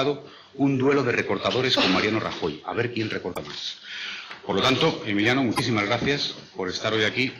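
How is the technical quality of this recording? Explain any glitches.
There are two short glitches, both from damaged data in the compressed stream. At 3.31 to 3.37 s and 5.53 to 5.60 s, bad bytes trip the decoder. It loses frame sync and hunts for the next header, leaving brief glitches of roughly 70 ms each.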